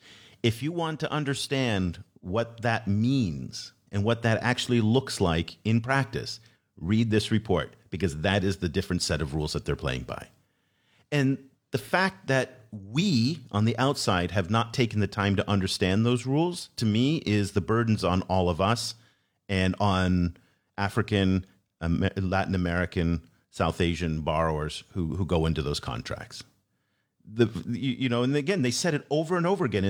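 No technical faults can be heard anywhere in the speech.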